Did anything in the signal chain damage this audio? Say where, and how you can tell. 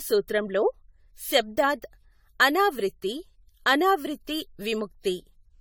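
Yes. There's generation loss at the codec stage: the speech sounds swirly, hollow and smeared throughout with blurred attacks, likely from around ten passes through AAC-LC at 96 kbit/s.

There's also an electrical switching spike at 1.57 s, a sharp snap on top of the speech, likely a nearby switch arcing into the analogue wiring.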